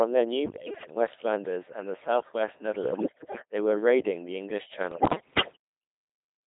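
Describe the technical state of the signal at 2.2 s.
Codec 2 vocoder processing is present at 2.2 s, as it is across the whole clip. The speech has been reduced to pitch, voicing, energy and a coarse spectral envelope, which fits a rate of about 2.4 kbit/s, then rebuilt from sine waves, so the original waveform is gone. Damage is heavy: the voice sounds robotic and buzzy, squeezed into a 200 Hz to 3.6 kHz band, with natural texture replaced by synthetic tone.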